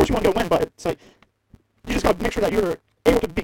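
From start to end, a block size mismatch (truncated) throws away each block's tail. The speech runs 1.88 times fast at near-normal pitch, with a 172 Hz buzz that fits a 256-sample read block. A spectrogram shows stripes at multiples of 172 Hz, and the waveform shows regular splice jumps.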